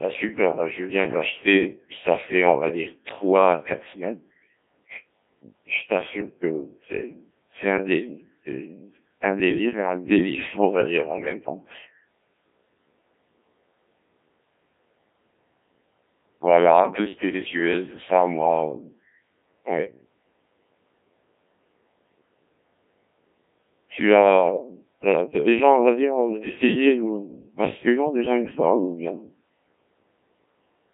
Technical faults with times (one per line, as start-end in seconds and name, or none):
0.00-30.94 Codec 2 vocoder